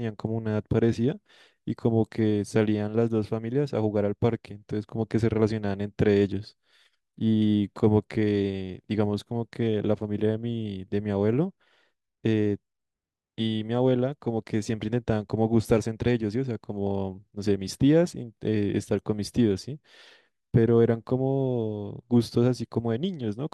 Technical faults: none

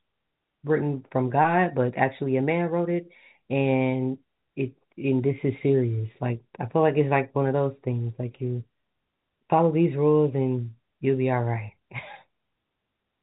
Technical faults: none

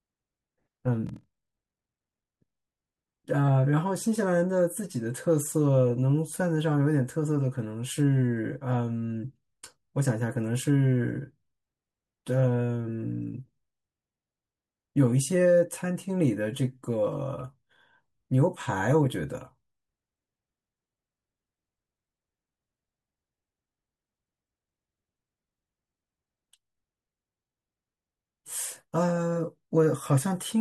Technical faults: block size mismatch (padded)

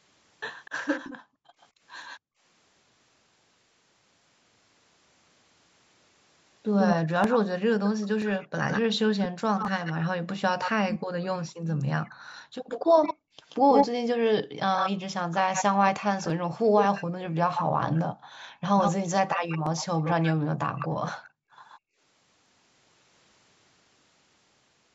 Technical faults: echo leak; background gated by the echo canceller; dropped samples

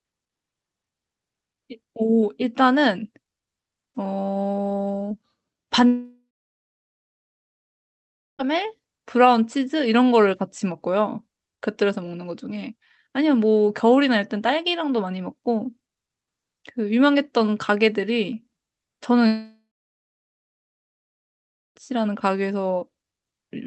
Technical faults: short concealed packet loss; long network dropout

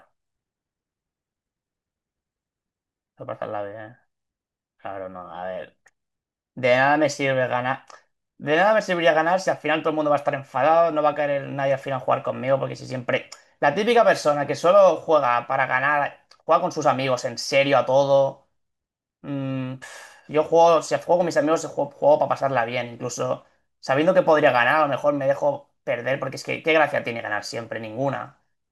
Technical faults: none

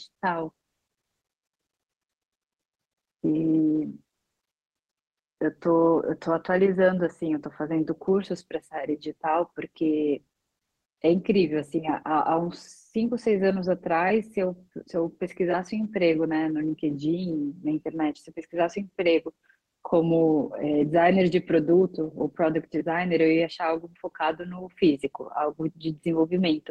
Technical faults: none

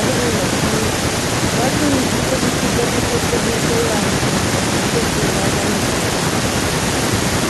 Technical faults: none

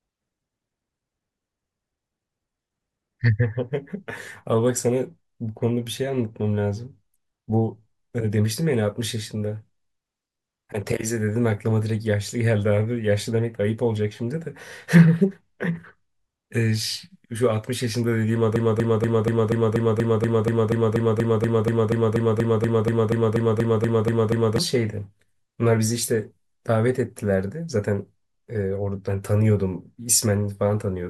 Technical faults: broken-record loop

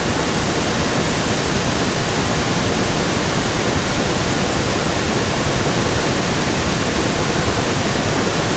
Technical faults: echo leak

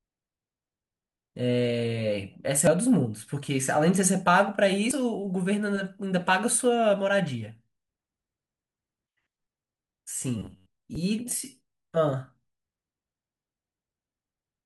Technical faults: damaged data in a compressed stream; robotic sound from repeated short buffers

